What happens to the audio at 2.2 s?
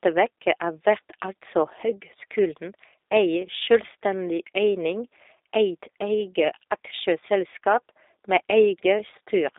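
At 2.2 s you're hearing G.729 codec damage, which runs through the whole clip. The speech is rebuilt from a vocal-tract model and a few pulses per frame, so it sounds rough and slightly synthetic, squeezed into roughly 300 Hz to 3.7 kHz with nothing above 3.8 kHz, which fits an 8 kbit/s stream.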